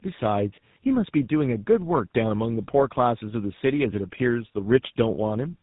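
From start to finish the speech carries tandem speech coding: nothing above 3.8 kHz, and a rough, muffled, warbly quality that fits two speech codecs in a row, likely AMR-NB then GSM full rate via G.711. One codec alone wouldn't compound the smearing this far.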